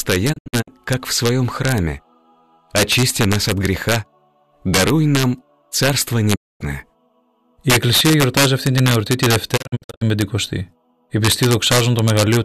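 Integer overflow runs through the whole clip: the signal is pushed about 2 dB past full scale, and instead of being limited, the loudest peaks, around half a percent of samples, wrap to the opposite sign, producing harsh, sharp cracks far more violent than ordinary clipping.

Digital broadcast dropout occurs at 0.32 to 0.69 s, 6.34 to 6.62 s and 9.56 to 10.03 s, where the receiver mutes on lost frames with 20 ms fades. The first and last are scattered holes (longest 72 ms and 48 ms), and the middle is one solid 240 ms gap.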